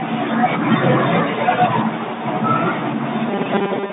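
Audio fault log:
3.28–3.92 s, robotic sound from repeated short buffers: the speech turns into a stiff, metallic buzz locked at 200 Hz right to the end. Likely the playback kept replaying a tiny 5 ms chunk while starved, skipping most of the real audio.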